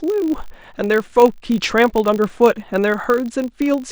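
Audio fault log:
throughout: filter restarted on every block, a 50 Hz buzz rising and falling with the speech, as each block starts from silence with a small transient.
3.65–3.72 s: DAB burbling, a brief burst of noise blips as stray bit errors pass error correction and put short blips of noise in single sub-bands, which fits about three damaged frames.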